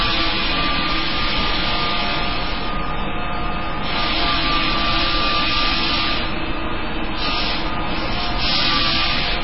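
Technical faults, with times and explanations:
Throughout, MP3 compression: nothing comes through above 5.5 kHz, and what's left has a heavy watery, swirly quality with smeared attacks. That's likely an MP3 encoder starved of bits, consistent with roughly 16 kbps, cutting the treble and switching weak frequency lines on and off between frames.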